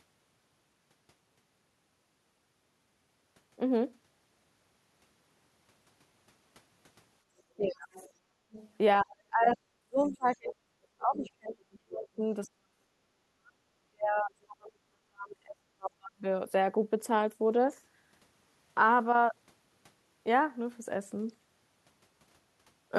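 From 7.38 to 8.7 s a faint second voice sits under the speech, about 25 dB below it. This is the other side's voice leaking through, likely loudspeaker echo that the canceller failed to remove. It differs from double-talk suppression because it is a separate voice added on top rather than the talker's own voice being changed.

Within that stretch, from 7.56 to 7.92 s, the talker's own voice is speech suppressed in double talk. It drops by roughly 30 dB for close to half a second, likely because the canceller mistook the overlap for echo.

From 8.2 to 8.51 s the background is gated by the echo canceller. The room tone sinks by about 7 dB and then comes back.

From 9.02 to 16.24 s the speech is suppressed in double talk again. Words fade or cut out in pieces, with drops of around 40 dB adding up to about five seconds. The leaking voice returns at 9.98–10.52 s, about 25 dB down, and at 11.23–11.77 s, about 20 dB down.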